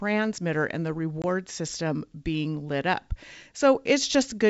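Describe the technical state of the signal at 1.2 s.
At 1.22 to 1.25 s, right after "and the", there's packet loss on an ADPCM call: about one packet, 20 ms, drops to hard silence. The decoder's predictor loses sync, so "system being lit up" comes back slightly distorted before settling.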